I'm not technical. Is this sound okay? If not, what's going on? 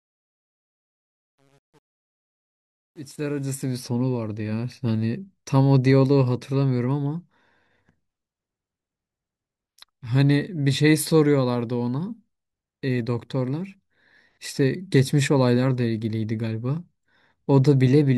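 No. There is truncation distortion on a fade at the start, from 0.0 to 3.83 s, where the sound fades in. It is roughest from 0.0 to 3.24 s. The volume change was made with too little detail kept, which fits only about 9 bits, and with no dither, the faint noise that normally hides this. As the level gets very quiet, the smooth sound wave collapses into coarse steps. That is why the quiet early part sounds gritty.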